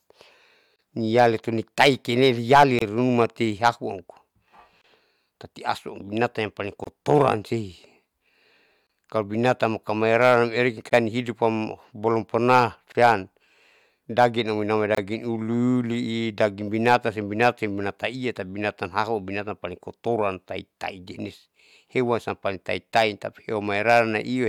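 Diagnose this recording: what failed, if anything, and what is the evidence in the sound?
Short holes of about 27 ms open in the speech at 0.76, 2.79, 4.82, 6.84, 8.87, 10.90, 12.92 and 14.95 s, about every 2 s, with smeared edges. This is a codec-stage gap at a join of encoded pieces, where untrimmed encoder delay and padding sit at each joined segment boundary.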